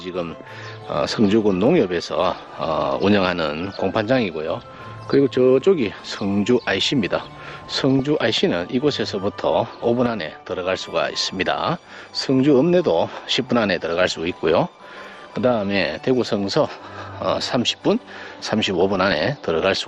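The whole clip has that dull, gurgly, grainy character of MP2 compression, likely from a low-rate Layer II stream, and it fits something around 80 kbps. Upper sub-bands keep dropping out and what's left is coarsely quantised. Then there's DAB burbling at 5.97 to 6.17 s, 7.78 to 8.00 s and 18.74 to 19.2 s. Bit errors of a fraction of a percent slip past the error correction and knock individual sub-bands up and down frame by frame, giving short blips of noise in single sub-bands.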